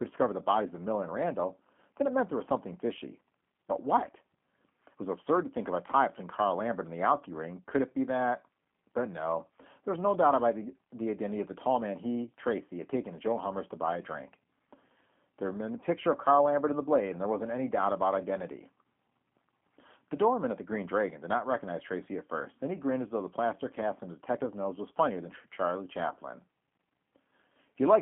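G.729 codec coding, throughout the speech: each short frame is rebuilt from a modelled vocal tract, a pitch estimate and a handful of excitation pulses, which fits an 8 kbit/s G.729A stream. The result sounds plainly rough and synthetic, confined to a 200 Hz to 3.4 kHz band.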